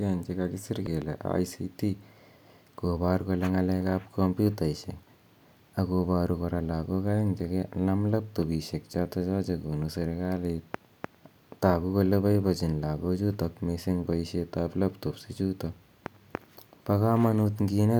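Right near the start, between 0.86 and 1.04 s, there's a loud pop, actually two sharp pops close together, landing a few dB above the speech, which carries on underneath. That's likely a voltage spike from a plug, switch or static discharge getting into the signal chain.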